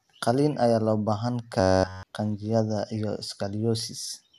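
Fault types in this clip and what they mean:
Robotic sound from repeated short buffers: audio likely arrived too seldom, so a slice of about 10.7 ms was replayed throughout instead. From 1.60 to 2.03 s, after "ayaa loo baahan", speech turns into a rigid metallic buzz locked at 93.8 Hz.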